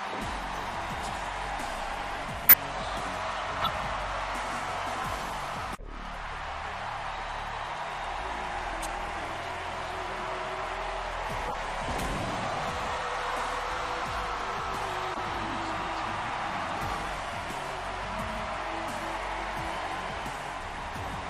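Damaged compressed frames reach the decoder and play uncorrected, a corrupt frame decoded fault that throws energy into the wrong frequencies. It is heard as brief chirps and noise bursts at 2.45–2.54, 3.62–3.69, 5.30–5.33, 8.81–8.86, 11.47–11.55, 13.28–13.35 and 15.13–15.19 s. The first is loudest.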